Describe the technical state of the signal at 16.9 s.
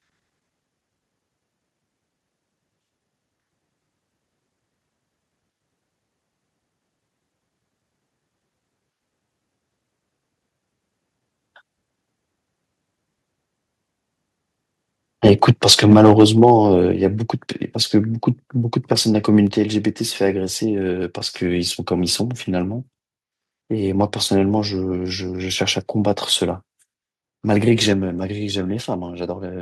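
At 16.92 s the speech drops abruptly in level by about 4 dB, with voice and background falling together in a single step rather than fading. This is a microphone volume stepped down event. The likely cause is the calling software judging the input too hot and cutting the device's capture volume in one move.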